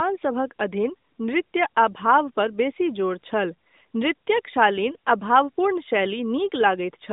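Nothing goes wrong anywhere in this speech, which just carries the narrow, phone-call band you'd expect from an AMR-NB mobile line running at 12.2 kbps.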